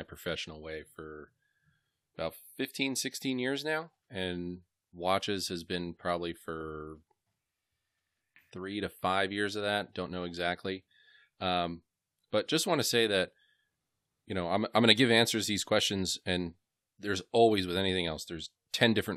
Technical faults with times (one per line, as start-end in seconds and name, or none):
none